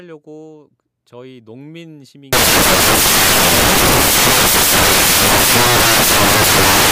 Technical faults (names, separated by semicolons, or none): samples built from the wrong bytes